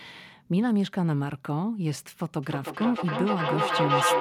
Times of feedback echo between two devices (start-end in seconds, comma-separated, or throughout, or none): 2.43-4.20